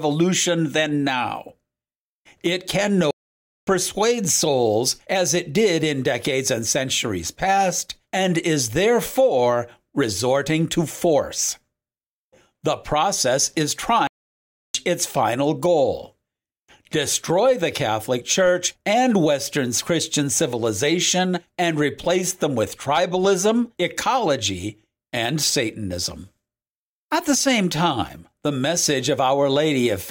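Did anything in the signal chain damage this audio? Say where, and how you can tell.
Yes, two playback stalls. The speech drops to silence at 3.11 s for 0.56 s and at 14.07 s for 0.67 s, then resumes, likely because the player ran short of data.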